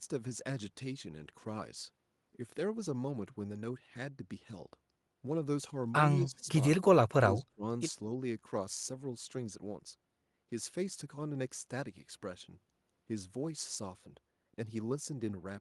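At 6.19 s the speech sinks by about 15 dB until 6.49 s, then from 6.77 s to 7.64 s it dips harder, about 25 dB at its deepest, over roughly 400 ms in total. That's the classic sound of speech suppressed in double talk, likely an echo canceller that couldn't separate this talker from the far-end echo while both were speaking, so it clamped down on everything. The call path's coding, topping out around 12 kHz, sits underneath all of it.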